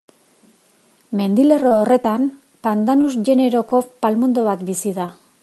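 From 1.47 to 2.14 s there is repeated packet loss, heard as robotic sound. Short holes, the longest 24 ms, keep getting patched by extending the last sound. The speech turns choppy.

Short concealed packet loss hits at 3.01 to 3.05 s, 3.69 to 3.73 s and 5.06 to 5.10 s. Each time about 20 ms never arrives. It is filled by continuing the previous sound, leaving a brief smear or wobble.

At 3.41 to 3.45 s comes a short stall from a late packet. The jitter buffer ran dry for about 15 ms, so the sound is held slightly too long. Nothing is lost.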